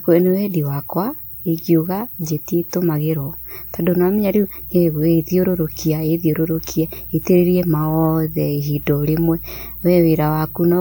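At 2.68 s and again at 6.69 s the speech catches with a brief click-like stutter, the signature of overlapping chunks. The audio was handled in 4-second blocks, each starting slightly early, so about 13 ms of sound plays twice at every join.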